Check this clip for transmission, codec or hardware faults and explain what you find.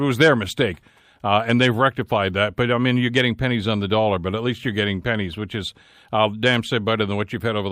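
Nothing faulty can be heard in this speech recording.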